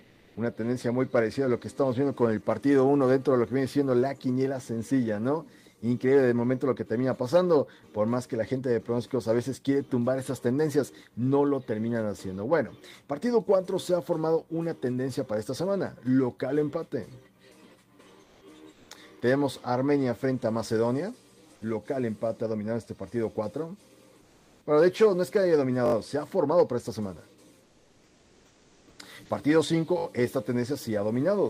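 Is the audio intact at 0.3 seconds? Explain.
No. From 0.03 to 0.35 s, a span of about 320 ms, the real background is replaced by comfort noise, likely because the sender paused transmission while no activity was detected and the receiver filled the gap with synthetic noise. It sounds like a steady, featureless hiss about 6 dB quieter than the surrounding background. On a spectrogram it shows as a smooth, uniform band without fine texture. On the waveform it shows as a flat, even envelope at a lower level.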